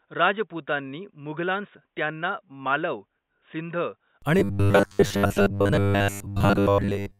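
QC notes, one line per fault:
0.00–4.22 s, input switched to a poorer device: the sound is dull and boxy, with a narrower band, a level about 10 dB lower, and a faint noise floor about 55 dB down. It likely came from a narrower-band microphone or headset profile, and it clears without a gap at 4.22 s.
4.39–7.19 s, robotic sound from repeated short buffers: the audio becomes a rigid metallic buzz at 100 Hz. That fits a 10 ms block being looped, likely because new audio arrived too late, so most of the real signal was skipped and replaced by repeats.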